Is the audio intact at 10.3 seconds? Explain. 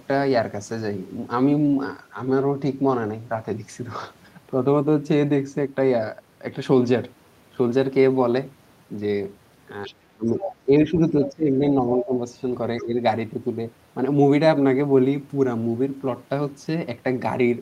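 No. From 10.16 to 12.15 s the speech is suppressed in double talk: the talker dips by up to about 15 dB, likely because the echo canceller turned down both sides at once. From 10.4 to 10.5 s the other side's voice leaks through as a brief scrap, about 10 dB below the speech, likely echo left in the microphone signal.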